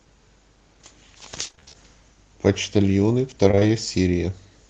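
From 1.47 to 1.76 s, and again from 3.48 to 3.63 s, repeated packet loss gives the speech a choppy, robotic texture. Gaps of up to 30 ms arrive in quick succession and are patched by stretching the preceding sound. Unlike a single dropout, the losses cluster, with about half of each stretch concealed.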